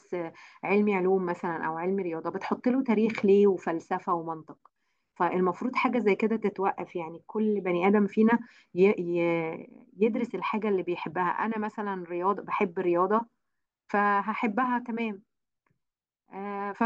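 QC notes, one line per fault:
Nothing to flag here; I listened through the whole speech recording and didn't hear any faults.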